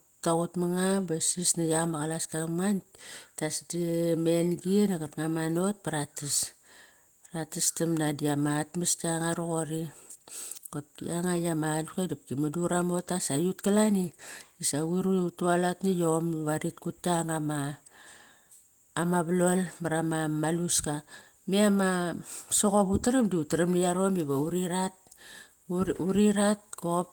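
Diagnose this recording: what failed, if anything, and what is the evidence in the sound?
Nothing failed: no stage from capture through playback leaves an audible defect anywhere in the speech.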